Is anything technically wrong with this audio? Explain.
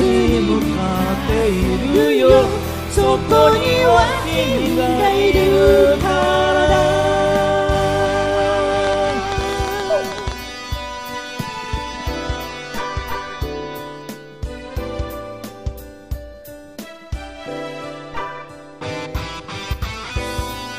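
Yes. From 8.85 to 10.33 s there is a train of clicks, likely from interference or a faulty connection injecting repeated pulses. Around fifteen similar pops arrive at an uneven pace, about 10 per second, standing out roughly 10 dB above the sound as a rapid ticking.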